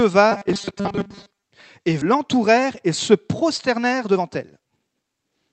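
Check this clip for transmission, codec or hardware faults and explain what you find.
Three faults are audible in this speech recording.

From 0.32 to 1.42 s there is robotic sound from repeated short buffers. New audio was likely arriving too slowly, so playback looped a tiny fragment, about 5 ms, over most of this stretch. The looping imposes a rigid 200 Hz metallic buzz that only loosely tracks the speech.

At 2.01 to 2.03 s the playback skips ahead. Roughly a second of audio was dropped while later material was already queued, and the two sides were butted together with no fill. The result is an abrupt jump with a chunk of speech simply missing.

From 3.69 to 5.46 s, right after "et se", there is a jitter buffer speed-up. The buffer held more audio than its target and trimmed short pitch-period slices repeatedly, about half a second in total. Speech runs about 26% faster at unchanged pitch and sounds hurried.

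Throughout, the Opus call path limits the audio to about 8 kHz bandwidth and adds its usual coding noise.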